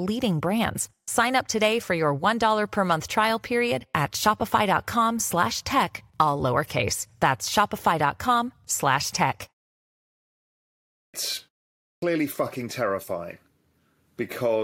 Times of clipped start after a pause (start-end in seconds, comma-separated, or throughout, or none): 11.03-11.14, 11.90-12.02